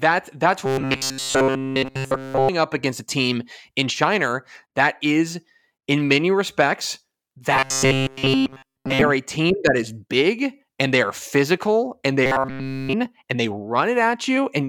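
From 0.66 to 2.49 s, 7.54 to 9.02 s and 12.26 to 12.94 s, robotic sound from repeated short buffers sets a rigid 133 Hz metallic buzz over the speech, likely a 7.5 ms chunk replayed while fresh audio stalls. Unlike flanging, its pitch never sweeps.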